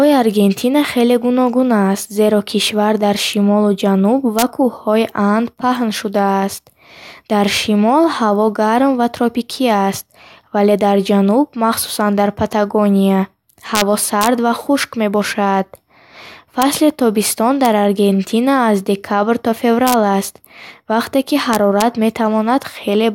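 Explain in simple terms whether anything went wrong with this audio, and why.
Integer overflow causes harsh cracks in this speech at 4.39–4.42, 13.75–13.81, 14.21–14.27, 16.62, 17.65, 19.87–19.94 and 21.53–21.82 seconds. Loud peaks exceeded the number limit and flipped sign.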